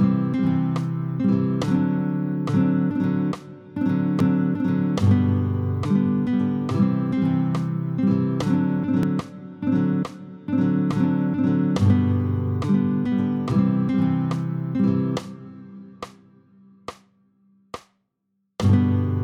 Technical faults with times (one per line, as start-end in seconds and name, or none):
4.20 dropped buffer (overrun)
9.03 dropped buffer (overrun)
13.51 dropped buffer (overrun)